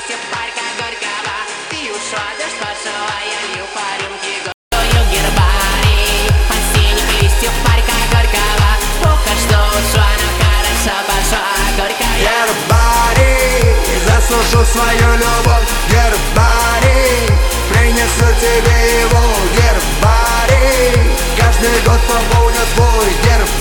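From 0 to 4.72 s the sound is band-limited, with nothing above 9.5 kHz, roughly 10 dB quieter and carrying a noise floor around 30 dB down; this is likely an input switched to a poorer device, with a 200 ms silence before fuller sound returns.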